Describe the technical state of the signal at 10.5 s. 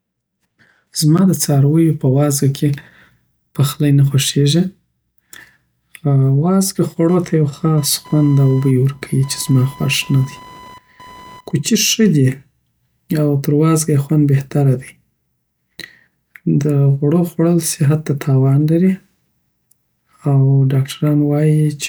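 At 10.5 s computer activity noise is present, from 7.09 to 11.62 s, ending just before "ښه دی". Processor or peripheral load disturbs the shared ground, producing a chirping buzz around 1 kHz, roughly 25 dB below the speech, that jumps up and drops back with the computer's activity rather than with the speech.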